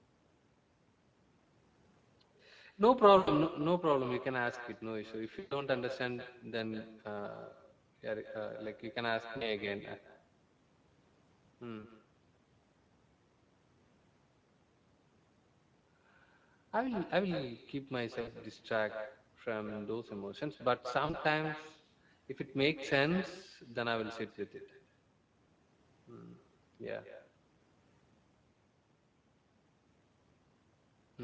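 All the way through, every phrase is shadowed by a second copy about a fifth of a second later, roughly 12 dB down and thinner. That's echo with no canceller: the far end's loudspeaker feeds its microphone and nothing removes that copy, so your own speech returns after the network round trip. On top of that, the Speex codec damage is plainly audible throughout. The speech sounds noisy and hoarse, which fits a middling Speex mode around 16.8 kbps that has too few bits for the excitation. The band up to 8 kHz comes through the call microphone processing, but above 4 kHz it's mostly a shaped noise fill rather than real detail. Then there are six spots of VoIP packet loss concealed by the speech codec, at 3.17–3.30 s (100 ms lost), 5.39–5.64 s (120 ms), 9.37–9.51 s (40 ms), 11.79–11.85 s (40 ms), 18.21–18.29 s (60 ms) and 21.05–21.15 s (40 ms). In each one the decoder stretches the last bit of sound into a fading buzzy tone or coloured noise, and the speech stays weak and smeared for a moment after packets resume.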